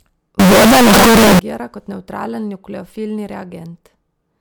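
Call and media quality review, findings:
0.40–1.39 s: speech turns loud, harsh, near-square at a fixed high level; noise as loud as speech, pitch followable. Likely float read as integer: 32-bit float decoded as 32-bit integer, sign/exponent bits set level. Unlike clipping, noise rises too.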